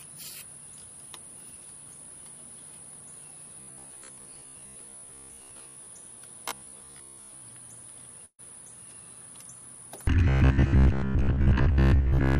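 From 3.61 to 5.87 s the sound goes rigid and metallic, a flat buzz locked at 66.7 Hz that only loosely follows the material underneath. That's robotic sound from repeated short buffers, likely caused by the playback side starving for data and looping the last chunk over and over. A 66.7 Hz buzz fits a repeated chunk of about 15 ms. Most of the real audio in that stretch gets skipped. The same buzz comes back from 6.49 to 7.42 s.

At 8.25 to 8.40 s there's a burst of packet loss. About 140 ms of audio never arrived, and the receiver papered over roughly 131 ms of it by stretching out the last sound and letting it fade. About 70 ms is plain silence. After that the audio picks up further along, and whatever fell in the gap is gone.

From 10.28 s to the end, at 12.39 s, the robotic buzz returns at the same 66.7 Hz.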